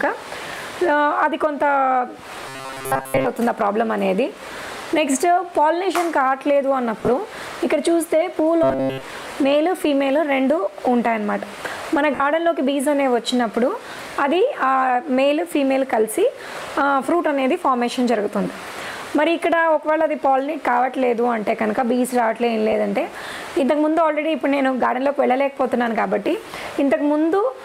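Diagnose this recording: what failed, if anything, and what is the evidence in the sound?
The driver or buffer stage shows robotic sound from repeated short buffers, from 2.48 to 3.26 s and again from 8.63 to 9.03 s. In both spans the sound collapses into a rigid metallic buzz at 133 Hz. That is a repeat of about 7.5 ms, likely caused by audio arriving too seldom and the gap being filled by looping the newest scrap. Most of the first span and all of the second are repeats. A spectrogram shows evenly spaced harmonic lines at multiples of 133 Hz, and the waveform shows identical short cycles tiled end to end.

The codec and Bluetooth link show lost LE Audio frames at three points: 7.00 to 7.08 s, 12.15 to 12.20 s, and a single dropout at 22.72 s. The first is 60 ms of missing audio scattered over 80 ms, with the longest gap about 20 ms, which fits roughly six 10 ms frames. The second is 50 ms in one stretch. 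The LC3 decoder concealed each gap by reusing the last spectrum with randomised signs, so tonal parts turn into a brief noisy smear. On a spectrogram, harmonic lines dissolve into diffuse broadband texture for those instants. The waveform loses its regular periodic shape there.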